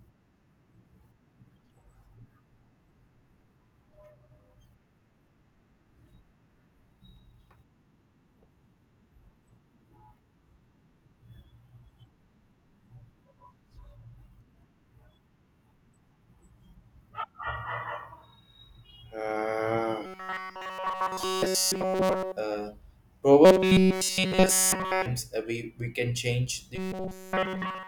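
Audio likely arriving too seldom, with a roughly 5 ms buffer looped over and over, causes robotic sound from repeated short buffers at 20.06–22.37 s, 23.45–25.06 s and, after "we we can change", 26.76–27.88 s. The speech becomes a rigid metallic buzz pinned at 188 Hz.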